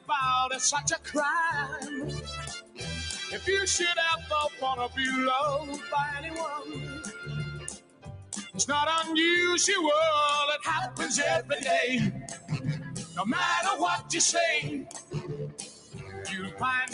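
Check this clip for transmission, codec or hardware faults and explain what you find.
A noise suppressor designed for speech is active across the whole clip, treating steady, sustained parts of the sound as noise and pulling them down. Its gain moves by roughly 15 dB as it decides what to keep, so sudden onsets mostly get through while held and decaying material sinks. The result is audible pumping and a thinned, fluttering texture wherever the sound sustains, because the suppressor keeps chasing the sustained content up and down.

There are six distinct dips where the noise suppressor cut the sound harder than elsewhere. They fall at 2.60 to 2.81 s (about 15 dB down), 6.59 to 7.29 s (about 8 dB), 7.57 to 8.32 s (about 16 dB), 12.21 to 12.51 s (about 11 dB), 14.82 to 15.33 s (about 13 dB) and 15.49 to 16.27 s (about 13 dB). In each, steady or fading sound sags or has its tail clipped short.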